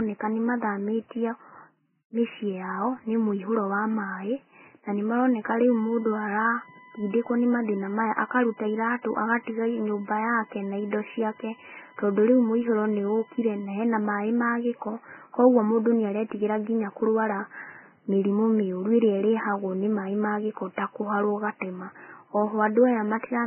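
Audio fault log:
throughout: Vorbis compression. The speech sounds hissy and grainy, nothing reaches above 3.1 kHz, and the codec damage is heavy. That points to a low-rate Vorbis encode, likely somewhere near 9 kbps. At that rate the encoder cuts the top end and quantises what's left of the treble so coarsely that the fine spectral detail turns into noise carrying roughly the same energy. That's where the grit on tones and the smeared attacks come from.
5.68–13.68 s: USB whine. Right after "na nĩmaroneka" a fixed-pitch whine comes in and holds for 8 s, sitting about 20 dB under the speech. It's built on 1 kHz, and the strongest component is the multiple at 5 kHz. That spacing fits USB's 1 ms frame timing. The bus pulls current in 1 ms bursts, the bursts get into the audio path through the power or ground, and what you hear is that pulse rate and its harmonics.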